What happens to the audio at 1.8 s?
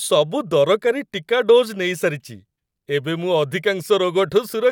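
Nothing goes wrong at 1.8 s: the speech carries on intact at that moment, with no break, distortion or added noise.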